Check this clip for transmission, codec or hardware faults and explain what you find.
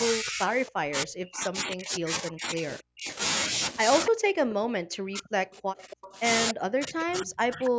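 Two kinds of fault run through this speech: the talker is repeatedly pushed down during double talk, and a delayed echo of the voice slips back into the signal.

Speech suppressed in double talk, from 0.08 to 3.1 s, 4.09 to 6.15 s and 6.52 s to the end. The likely cause is an echo canceller that cannot separate the local talker from loudspeaker echo while both sides speak, so it attenuates everything. The voice sinks by as much as about 40 dB, dipping and breaking into fragments, for roughly five seconds in total.

Echo leak at 0.67 to 0.71 s, 4.06 to 4.1 s, 5.52 to 6.17 s and 7.64 to 7.7 s. A delayed copy of the voice trails 276 ms behind, likely because the far end's loudspeaker pickup escaped its echo canceller and was returned. It sits about 15 to 25 dB below the speech. It is heard as brief ghostly scraps, with a longer stretch near 5.5 to 6.2 s, band-limited like the call path, which carries nothing above 8 kHz.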